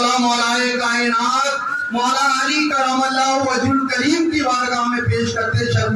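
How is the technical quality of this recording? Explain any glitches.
One glitch stands out, a drift correction step. From 1.67 to 2.71 s the audio runs about 5.5% fast and about 92 cents sharp, close to a semitone, then snaps back. Clock-matching software likely changed its playback rate in one jump to rebalance its buffer. Unlike wow or flutter, which wobble gradually, this shift is abrupt and holds steady.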